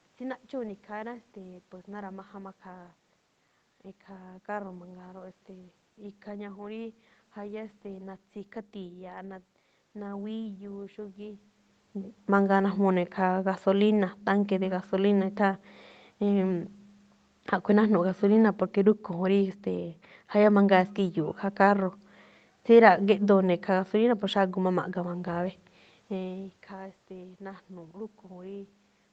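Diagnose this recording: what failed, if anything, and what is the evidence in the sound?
Nothing in the chain has failed: the speech comes through a normal Opus call path whose top end stops at 8 kHz, as that bandwidth setting intends. The room's background noise and the level changes as the talker moves, once a little before the midpoint and again near the end, belong to the recording rather than to any stage of the system.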